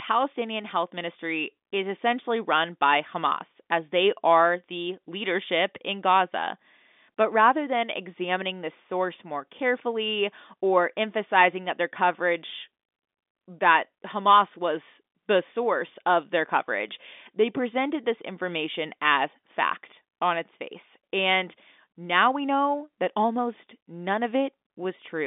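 No technical faults are audible.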